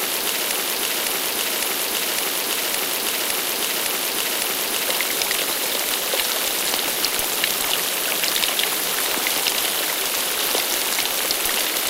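The playback or stream likely stalled and kept resending its last buffered fragment, producing a broken-record loop already under way at 0.0 s: a 0.56 s piece repeats exactly, back to back, eight times until 4.88 s, and the audio meant for that stretch is lost.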